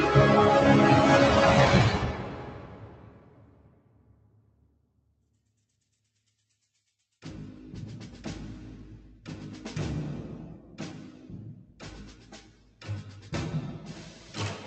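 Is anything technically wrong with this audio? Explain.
Yes. A noise suppressor designed for speech is acting on this sound throughout, treating sustained tones, ambience and reverb tails as noise. Its gain rides up and down by roughly 10 dB, so attacks pass while held material sinks, giving an audible pumping, fluttering, thinned-out character.

There are also specific moments of sound cut by the noise suppressor: 1.92 to 4.67 s, the longest, with about 8 dB of loss over roughly two seconds; 11.56 to 11.8 s, about 8 dB; and 12.15 to 12.81 s, about 7 dB. In each, steady or decaying content is pulled down.

Separately, the audio passed through an Opus call path, whose band limit near 8 kHz is expected behaviour.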